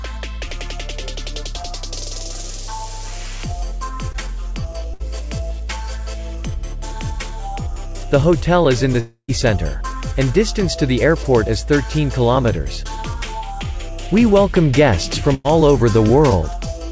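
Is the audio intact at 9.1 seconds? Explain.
No. A long network dropout runs from 9.00 to 9.30 s. Packets likely stopped arriving, so the receiver stretched the last sound into a fading buzz that gives way to silence, and the audio resumes with roughly 280 ms lost.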